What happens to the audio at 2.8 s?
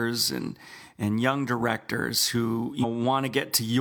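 Damaged data in the compressed stream hits from 2.79 to 2.85 s, right after "and young directors who". Corrupted bytes make the decoder misread those frames and lose sync until it finds the next frame header, leaving a brief chirp or squawk in the speech.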